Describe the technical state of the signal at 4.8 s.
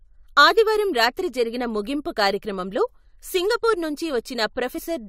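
Compressed frames skipped at 4.77 to 4.79 s: about one frame of the coded speech never reaches the output, either missing from the stream or rejected by the decoder as damaged, so playback jumps forward by roughly 20 ms. The frame length here is 23.2 ms. At the seam a tiny piece of the speech is simply absent.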